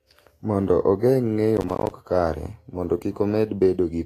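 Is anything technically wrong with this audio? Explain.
Yes. Throughout, the speech sounds hissy and grainy with nothing above 14.2 kHz, likely Vorbis compression at a low bitrate near 33 kbps; unlike crackle, it never stops. From 1.57 to 1.91 s, processor overload crackle: many missed buffers of roughly 10 ms fall silent, producing gritty tearing confined to that stretch, not isolated clicks.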